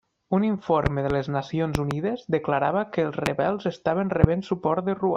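Loud pops occur at 0.86 to 1.13 s and 1.75 to 1.94 s, each a double pop, then single pops at 3.26 to 3.29 s and 4.24 to 4.26 s. They jump well above the speech, roughly 15 dB at first and about 20 dB for the rest, while the speech continues underneath. The likely cause is a sudden voltage step or pulse, such as a plug, switch, static discharge or driver glitch, shaped by the circuitry into sharp thumps.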